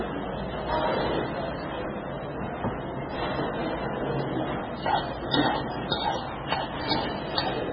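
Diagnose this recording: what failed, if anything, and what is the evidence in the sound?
The fault sits at the codec stage and runs through the whole clip. Nothing is present above 5.8 kHz. The top is cut flat. Weak detail flickers in and out, giving a watery, swirling texture. This is likely heavy MP3 compression, consistent with about 16 kbps.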